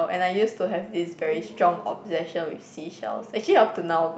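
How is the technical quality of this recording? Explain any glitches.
The speech carries no technical faults; it reached this recording through a WebRTC call path, where its high end stops at about 8 kHz in the way an Opus setting would, and it keeps the ordinary coding character of that codec.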